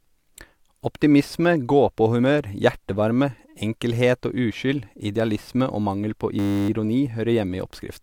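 At 6.39 s, after "idealisme og mangel på", a system hang loop begins. The system stalls while the hardware replays one 10 ms buffer 30 times until 6.69 s, a steady 100 Hz buzz. The exact repetition gives a pitched tone rather than a dropout's silence.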